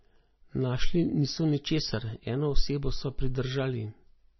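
Throughout this speech recording the sound points to heavy MP3 compression at a very low bitrate, roughly 24 kbps, as the likely cause. Starved of bits, the encoder has cut the treble at a fixed point, leaving nothing above about 5.9 kHz, and has dropped weak frequency lines that flicker in and out between frames. The result is dull, band-limited audio with a watery, swirling texture, chirpy s sounds and smeared attacks.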